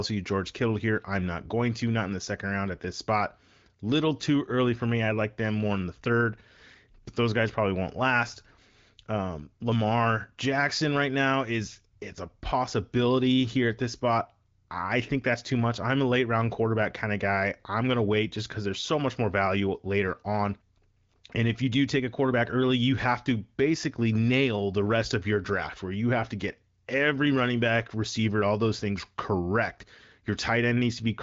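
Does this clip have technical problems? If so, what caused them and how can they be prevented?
No, there is nothing here to fix: the speech carries the band-limited sound of an AMR wideband (HD Voice) path at 15.85 kbit/s, with nothing above 7.5 kHz, which is how that path normally sounds.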